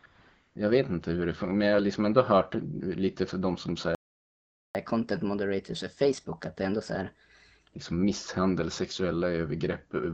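At the very start, from 0 to 0.03 s and again from 0.05 to 0.55 s, the background becomes a smooth, steady hiss. This is AMR comfort noise: with no speech frames sent, the receiver synthesises filler noise. From 3.95 to 4.75 s the audio drops to silence for 0.8 s, a playback stall, likely from the player running out of buffered data. From 4.75 to 7.75 s the speech runs 1.15 times fast and roughly two semitones sharp. This is catch-up at higher speed, with the player resampling its backlog to recover the lost time.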